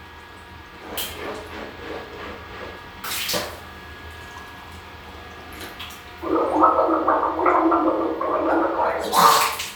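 Nothing in this audio points to a technical fault at any moment; the signal stays steady and intact throughout.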